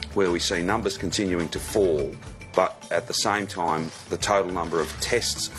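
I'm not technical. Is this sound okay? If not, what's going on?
No. Damaged data in a compressed stream causes a brief glitch from about 3.65 to 3.70 seconds, lasting about a twentieth of a second. Audio like this is stored in small packed chunks that a player unpacks one after another. Here a bit of that stored data got scrambled or lost, so the player couldn't unpack that chunk properly, lost its place, and had to hunt for the next good chunk. That stumble comes out as a short chirp or blip.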